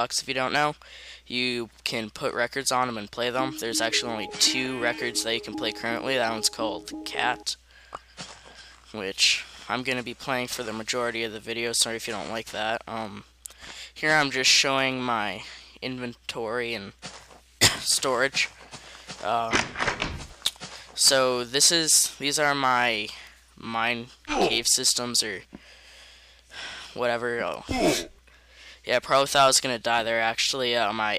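No technical faults can be heard anywhere in the recording; the signal stays steady and intact throughout.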